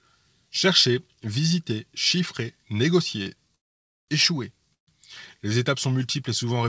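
At 3.23 s a sound is held slightly too long, about 31 ms, with a faint buzz or dip: a short stall from a late packet, where the emptied jitter buffer stretched the last sound until the packet arrived. From 3.55 to 4.11 s the audio drops to silence for about 0.53 s, and again from 4.74 to 4.90 s for about 0.13 s, each time resuming exactly where it stopped with nothing lost. These are call audio freezes, likely from packets held up in transit so the receiver had nothing to play. Across the clip, nothing is heard above 8 kHz, which points to a wideband call codec such as G.722 at 64 kbps.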